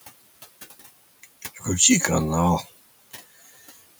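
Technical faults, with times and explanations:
throughout, noise suppressor artifacts: the background noise sinks in the pauses and creeps back under the speech. Frame by frame, the suppressor pulls the bands it judges to be steady noise down by about 18 dB, so the floor pumps.
1.42 to 1.66 s, speech cut by the noise suppressor: part of the speech sounds swallowed, dipping about 12 dB at worst over roughly a tenth of a second. The suppressor mistook these soft sounds for background noise and turned them down with it.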